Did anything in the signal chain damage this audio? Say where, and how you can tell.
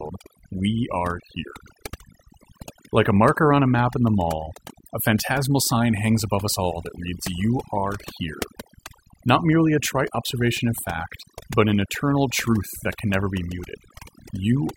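Yes: overdone noise removal throughout, at the call-processing stage. Bands near the noise estimate are cut hard, leaving twinkling near-silent background and speech with its quiet parts cut away.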